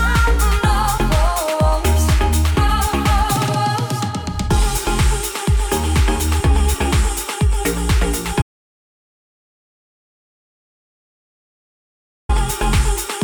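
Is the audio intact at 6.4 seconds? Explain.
Yes, the audio at 6.4 seconds is intact, with no dropout, glitch or other fault at that moment.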